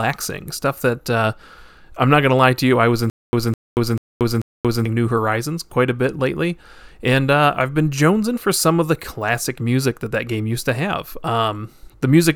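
From 3.10 to 4.86 s the speech breaks into a stutter with silent gaps: a 208 ms fragment plays four times, each followed by 231 ms of dead silence, repeating every 439 ms. The likely cause is a stalled stream replaying its last buffered fragment at each retry before running empty, so the intended audio for that stretch is lost. On a waveform this shows as identical blocks separated by flat, near-silent gaps; a spectrogram shows repeated matching patches divided by dark columns.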